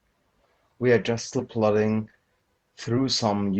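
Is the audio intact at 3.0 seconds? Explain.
No. From 2.97 to 3.00 s the speech jumps ahead. These are compressed frames skipped. Frames the decoder never played were dropped, and the roughly 70 ms gap fits about three 20 ms frames.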